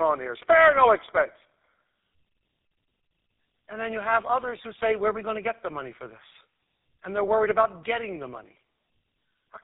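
Right through the clip there's tandem speech coding: the sound fits passing through two low-rate speech coders back to back, likely an AMR-style then a GSM full-rate stage. It's rough, warbly and muffled, with nothing above 3.8 kHz.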